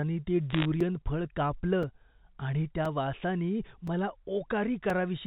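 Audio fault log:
0.50–0.65 s, bit errors on a digital phone line: a brief burst of sharp crackling ticks as flipped bits, somewhat under one percent, corrupt individual G.711 samples.
0.81–4.90 s, periodic USB or driver dropouts: evenly spaced ticks every 1.024 s, each a gap of about 4 ms filled with silence as a blocked bus or driver loses audio.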